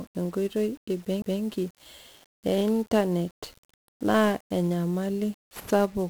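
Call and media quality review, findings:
Fuzzy, crackly speech throughout, treble buried under broadband hiss: heavy 1-bit DFPWM compression, one bit per sample steering an adaptive level, leaving coarse quantisation noise.

Tick and a brief mute of about 20 ms at 1.22–1.24 s, then speech resumes from another point: CD skip, the laser jumping tracks on the disc spiral.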